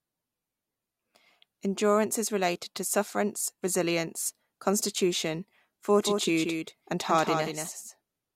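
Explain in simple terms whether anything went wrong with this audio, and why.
At 6.01 s the speech suddenly gains a second, somewhat quieter copy of itself, trailing about a fifth of a second behind and continuing to the end. This is a doubled audio track. The copy appears abruptly, with no fade or room sound, and each syllable sounds twice. The likely cause is the same sound being picked up a second time through a slower route, or an edit that left two copies overlapping out of step.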